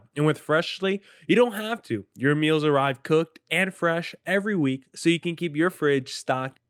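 No technical faults are audible.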